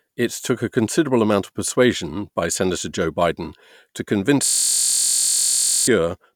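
System hang loop, 4.46 to 5.88 s: playback froze, cycling one 23.2 ms chunk, which fits a 1024-sample buffer, into a steady 43.1 Hz buzz.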